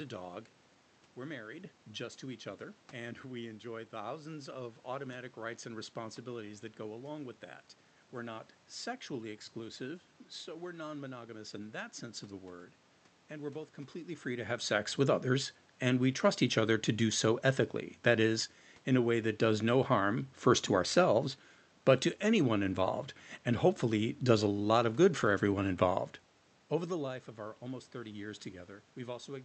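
Nothing goes wrong on the technical side here: the room noise belongs to the recording itself, the shifts in level around 14 s and again near 26.5 s are simply the talker moving relative to the microphone, and the top end rolling off at about 8 kHz is just how the Opus call path carries the sound.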